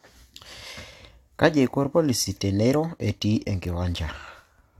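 No technical faults can be heard anywhere in the recording. Nothing in the signal chain intrudes on the speech at any point.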